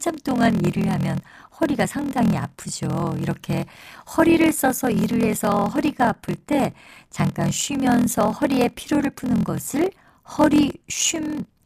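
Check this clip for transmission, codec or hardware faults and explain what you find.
One fault runs through the whole clip: a block size mismatch (padded). One stage writes shorter blocks than the next reads. The sound points to 1024-sample blocks, with zeros filling the rest. Those gaps produce a 41.7 Hz buzz. The speech plays at 0.889 times normal speed, with its pitch about unchanged.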